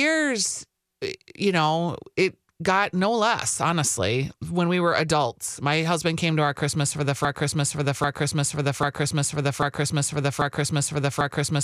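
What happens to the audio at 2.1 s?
Nothing goes wrong at 2.1 s; the speech continues there without any audible dropout, click, distortion or other fault.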